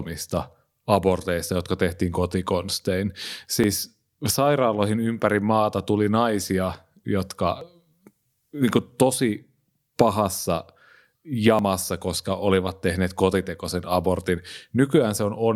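At 3.64 s after "aborteista jotka tehtiin kotikonstein", then 7.61 s and 11.59 s before "koska olivat tehneet kotitekoisen", the speech skips briefly: audio missing between chunks, roughly 20 ms lost at each, likely from 4 s chunk boundaries.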